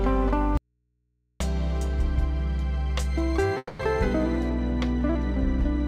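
The 5.9-second audio has three separate faults. From 0.57 to 1.40 s there is an audio dropout to a faint residue: the sound cuts off abruptly for about 830 ms, and the gap holds only mains hum roughly 50 dB below the programme level. The likely cause is a lost feed upstream of a stage that stayed live and picked up hum from the open input. The instant edges and the hum separate this from a natural pause or a fade, and the absence of any continued tone separates it from a freeze. At 3.57 to 3.81 s there is a call audio freeze. The last sound is stretched into a decaying buzz or hiss, followed by about 30 ms of silence, and the audio then resumes exactly where it stopped. The 220 ms gap is inserted rather than cut out, so nothing is lost and everything after it runs 220 ms late. That pattern likely comes from held-up packets draining the jitter buffer, and the smeared continuation is what distinguishes it from a dropout. 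From 4.49 s to the end, de-emphasis has been applied wrongly. A smooth treble slope leaves 10 kHz about 8 dB below 1 kHz, so the sound turns dull and muffled. A deliberate low-pass filter would cut off more steeply at one frequency, whereas this loss is a gentle, even tilt across the whole top end.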